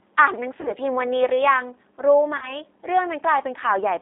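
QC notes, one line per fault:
Throughout, G.729 codec: audio is confined to roughly 250 Hz to 3.6 kHz, with a rough, slightly synthetic grain from pulse-based excitation, which points to an 8 kbit/s G.729A encode. That grain separates it from plain band-limiting, which would stay smooth.
0.61–0.75 s and 2.37–2.54 s, VoIP packet loss concealed by the speech codec: the decoder stretches its last pitch and filter into a buzzy tone or coloured noise that fades, where a plain dropout would leave silence. The gaps are about 40 ms and 50 ms, which fits four and five 10 ms frames. The sound stays weak briefly after each.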